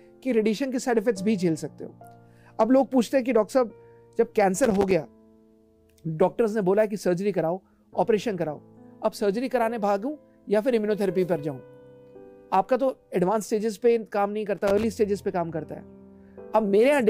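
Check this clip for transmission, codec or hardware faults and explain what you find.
There is a hardware fault, loose connector crackle, occurring twice. Loose connector crackle appears from 4.64 to 4.91 s and again from 14.57 to 14.84 s, each burst lasting under a third of a second. A worn or dirty contact is making and breaking as it shifts, chopping the signal on and off and popping wherever DC sits on the line. The result is an irregular scratchy crackle laid over the sound.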